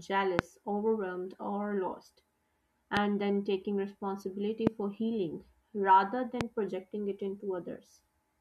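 Four loud pops sit over the speech, at 0.39–0.41 s, 2.97–2.99 s, 4.67–4.69 s and 6.41–6.43 s. Each is a single sharp thump lasting a couple of hundredths of a second, the first standing around 25 dB above the speech and the rest around 20 dB. The likely cause is a voltage spike from a switch, static or driver glitch. Unlike a dropout or a digital click, the speech carries on unbroken beneath each pop.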